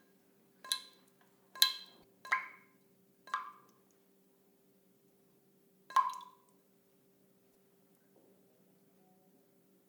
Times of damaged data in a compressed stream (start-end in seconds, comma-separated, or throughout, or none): 2.00-2.03, 5.34-5.37, 7.51-7.54